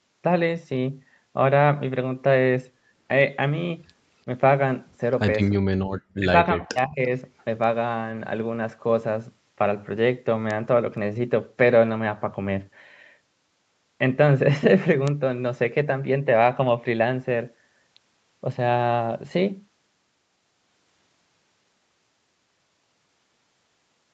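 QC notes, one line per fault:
5.81–5.90 s, background gated by the echo canceller: room tone falls about 40 dB for roughly a tenth of a second and then returns.
6.18–6.32 s and 6.55–7.10 s, speech suppressed in double talk: speech dips by roughly 35 to 40 dB, briefly and then for about half a second, likely while both sides talked.
7.38–7.44 s, echo leak: a faint copy about 40 dB down arrives 342 ms late, likely residual loudspeaker pickup. Its distinct delay separates it from room reverb.
15.08 s, bit error spike: a single sharp broadband tick from one corrupted sample, unrelated to the surrounding signal, unlike gating dips or echo.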